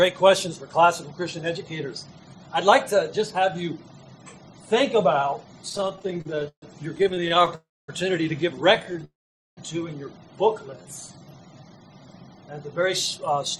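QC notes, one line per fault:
5.69–7.53 s, repeated stalls (stutter): the audio halts 31 times, with about half a second filled in and the longest hold 136 ms. Packets kept arriving late, so the receiver kept stretching the last sound. It drags in many short hitches rather than one break.
7.55–7.90 s, call audio freeze: a 331 ms pause in which the last sound rings on briefly and then goes quiet for about 250 ms before the audio resumes where it stopped, nothing lost. The likely cause is packets held up until the buffer emptied. Unlike the stutter, this is one solid gap.
8.74–9.04 s, repeated stalls (stutter): eight very brief holds of 12 ms at most, totalling 71 ms, as late packets left the buffer short again and again. This is a fine flutter of tiny catches, not a single stop.
9.04–9.59 s, call audio freeze: a longer 525 ms break, mostly silent for about 460 ms after a short tail of held-over sound, then the audio continues intact. 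Packets were likely delayed until the buffer ran dry. It is one clean gap, longer than the one at 7.55 s.
10.59–11.61 s, jitter buffer slow-down: the audio plays at about 86% speed with unchanged pitch, as the receiver repeated pitch periods to add 154 ms of reserve. Sounds are drawn out smoothly with no gaps, which distinguishes it from a stall or freeze.
12.82–13.57 s, jitter buffer speed-up: the audio runs at about 108% speed with pitch intact, as the receiver trimmed short pieces totalling around 70 ms to shed excess delay. The hurried feel with no pitch rise distinguishes it from a sample-rate error.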